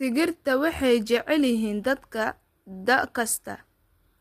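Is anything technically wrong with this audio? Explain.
Yes, the speech carries plainly audible codec damage from start to finish, and it sounds like low-delay AAC compression, likely AAC-ELD. That codec works in very short frames, so it can't separate pitch harmonics cleanly and burns extra bits doing it. The roughness here points to a rate around 32 kbps. You hear it as a grainy, rough voice with noise filling the gaps between harmonics and a top end that sounds thin or synthetic.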